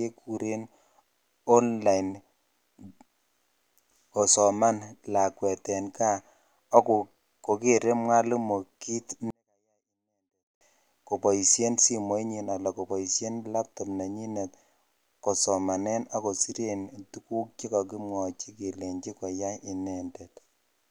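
At 9.30 s the speech suddenly drops to near silence and stays there until 10.61 s, about 1.3 s in all. This is a 24-bit alignment error, too quiet. The audio was stored as 24-bit samples in the low bytes of a 32-bit word. Playback read those words as full 32-bit integers. Every sample lost about 48 dB at once. The speech is still clean, just barely audible. Then normal level returns.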